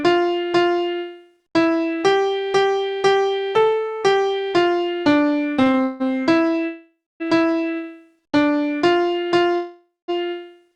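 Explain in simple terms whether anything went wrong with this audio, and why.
Between 5.57 and 6.02 s there are repeated stalls (stutter). The sound catches four times, each pause up to 160 ms, padded by stretching what came just before. Nothing is lost; it just drags. That string of short hitches sets it apart from a single freeze.

At 6.66 to 7.22 s and 9.55 to 10.10 s comes a call audio freeze. The last sound hangs as a fading buzz for about half a second, ending in silence, then carries on unbroken. The likely cause is data arriving late on the network, so the player ran out and waited.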